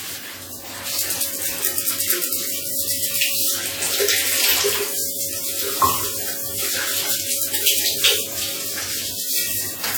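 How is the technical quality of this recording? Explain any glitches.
Quality is compromised by codec damage from start to finish. Throughout, the sound rings and smears, with a washy hiss that swells and fades with the signal. This is likely WMA compression. Its long transform blocks spread quantisation noise over tens of milliseconds. The damage is plainly audible, which fits a low bitrate near 48 kbps.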